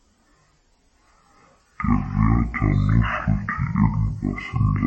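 From start to finish, the speech plays at half speed and a full octave low, the signature of stereo read as mono: interleaved left and right samples were taken as one channel. A spectrogram shows harmonics compressed downward, with a fainter mirrored copy in the upper half.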